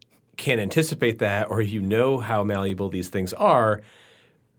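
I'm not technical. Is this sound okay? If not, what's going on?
No, there are two kinds of glitch in this speech, both small and brief.

First, a lost packet rebuilt from error correction. Just before "that or you know", around 1.07 to 1.09 s, a tiny slice of audio went missing in transit. The following packet carried a rough backup copy, and the player used that instead of leaving a gap. So you hear no dropout, just a split second that sounds grainier and noisier. It happens again from 2.51 to 2.57 s, right after "or you know how", where roughly 40 ms was patched this way. That fits a couple of separate packets being lost.

Second, chunks out of order. Around 2.69 to 2.71 s, still between "or you know how" and "these things", a 10 ms sliver of sound arrived one chunk late and got played after the piece that should have followed it. Nothing is missing, but the shuffle creates abrupt joins, so that instant sounds jumbled.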